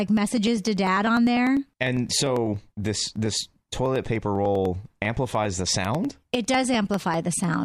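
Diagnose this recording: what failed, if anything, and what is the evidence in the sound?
Periodic USB or driver dropouts, 0.07 to 7.54 s: a tick every 0.1 s through the speech as roughly half a millisecond is skipped each time the driver stalls.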